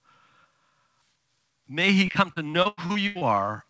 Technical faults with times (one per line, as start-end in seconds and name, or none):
2.06-3.40 repeated packet loss (robotic sound)